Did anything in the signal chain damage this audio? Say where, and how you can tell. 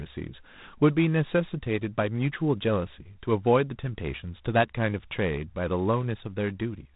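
Yes, at the codec stage: G.726 ADPCM runs throughout the speech, with nothing above 3.9 kHz and a harsh, rasping hiss riding on the speech level, which fits the 24 kbit/s mode. With so few bits per sample, the prediction error is coarsely quantised.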